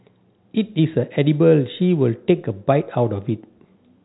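No technical faults can be heard in the speech, which carries the narrow band of G.711 telephone coding with nothing above 3.9 kHz.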